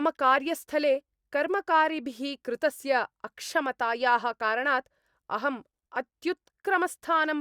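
Nothing stood out on listening to this speech clip.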